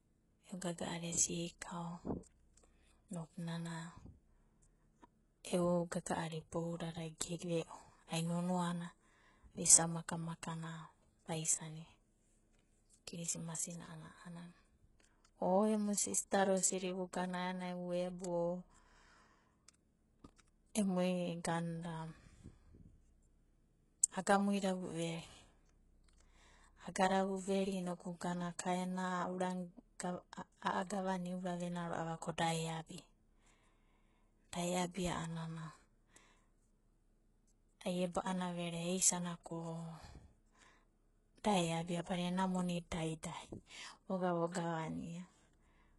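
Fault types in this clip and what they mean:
HE-AAC compression: the speech carries likely HE-AAC coding at a low bitrate, around 12 kbps, with heavy damage. Nothing sounds above 11.5 kHz, and the upper band is rebuilt from copied lower bands, so sibilants turn gritty and metallic with a lisping edge.
Pre-echo: at 42.04 s, between "da eabia" and "badina ena monida da", a brief hiss runs ahead of a sharp onset for about 32 ms. Block-spread quantisation noise fills the quiet gap before the attack, leaving the onset soft and smeared.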